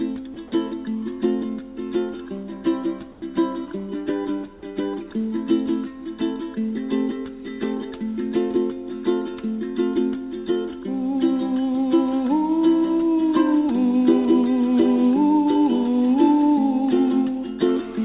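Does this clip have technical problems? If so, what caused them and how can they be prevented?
Yes. At 0.34 s a 20 ms slice of sound vanishes and a short burst of steady hiss takes its place, likely sound dropped by the voice detector, which misjudged that moment as background and stopped sending. Tuning the detector less aggressively, or adding hangover time, prevents it.

From 3.12 to 3.22 s the real background gives way to about 100 ms of flat, featureless hiss roughly 5 dB quieter. That's comfort noise in place of the background, likely from the sender pausing transmission and the receiver filling in. Turning off discontinuous transmission avoids the swap.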